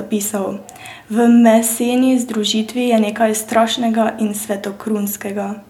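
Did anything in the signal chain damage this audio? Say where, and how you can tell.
No, no damage is audible.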